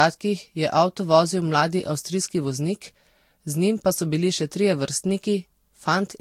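The speech carries generation loss from start to finish. It sounds swirly and hollow, consonant attacks smear, and nothing sits above 16.7 kHz. That's likely from about four rounds of lossy re-encoding, Vorbis-flavoured at around 64 kbit/s, each pass stacking fresh quantisation noise.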